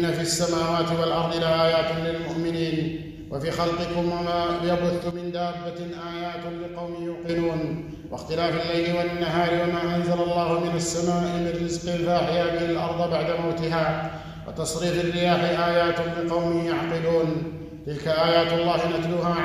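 The digital gain likely changed in a single step, with no ramp, as when a level setting or a bit shift takes effect between one sample and the next. The result is a sudden gain jump at 5.11 s: the sound and its background noise both drop together by about 8 dB, stay at that lower level, and then jump back up abruptly at 7.29 s, so the level change is heard as two hard steps.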